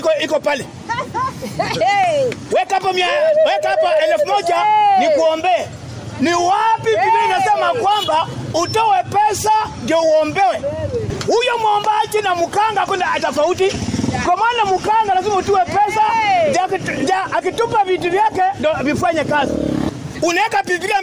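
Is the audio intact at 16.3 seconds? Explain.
Yes, the audio at 16.3 seconds plays through cleanly, with no dropout, click, distortion or other fault at that moment.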